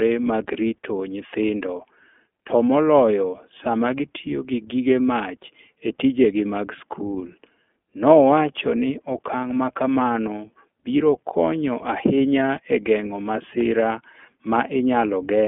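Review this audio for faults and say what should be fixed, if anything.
iLBC codec damage runs through the whole speech clip. The line passes only 200 Hz to 3.4 kHz. Each frame's excitation is coded alone, so the voice sounds plainly rough and synthetic. That fits the 20 ms, 15.2 kbps mode. Use a wideband codec instead.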